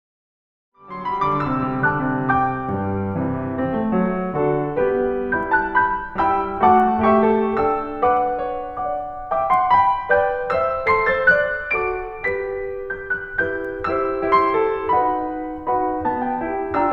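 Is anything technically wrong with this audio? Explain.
No, nothing technical is wrong with this music: it fades in smoothly from about half a second to 1.75 s, a deliberate edit with no click or hard edge.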